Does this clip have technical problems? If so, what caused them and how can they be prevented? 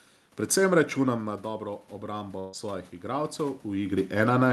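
Yes. From 1.03 s to 4.21 s there is automatic gain rising. After the talker moves away from the microphone around 1.0 s, the input drops by about 10 dB. The gain control responds by slowly raising its gain by about 6 dB over roughly three seconds. Because it amplifies everything it receives, the voice and the room noise swell together instead of the level recovering at once. Keeping the talker at a steady distance from the microphone, or using a slower, capped gain control, would prevent this.

From 2.39 s to 2.55 s there is a burst of packet loss. About 140 ms of audio never arrived in time to be played. The receiver filled a gap of roughly 137 ms by extending the last sound it had and fading it, so a brief held, fading sound replaces the speech. The audio then resumes further along with that stretch missing. A more stable network connection, or forward error correction in the Opus stream, would prevent this.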